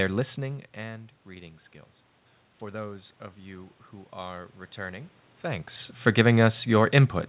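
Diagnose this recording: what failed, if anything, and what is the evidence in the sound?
The call processing stage's automatic gain rising begins at 2.59 s, just after "listening and reading skills". The input fell by about 17 dB, so the gain climbed by about 4 dB until 5.73 s, and the voice and room noise swell together.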